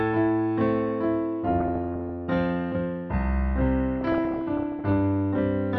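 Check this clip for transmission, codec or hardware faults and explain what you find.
There's DAB burbling in two stretches, 1.51 to 2.10 s and 3.98 to 4.91 s. Weak reception lets bit errors slip past error correction into the MP2 data, so individual sub-bands jump in level frame by frame. The result is bubbling, squelchy chirps over the sound, worse in the second stretch, where errors run near one percent rather than half that.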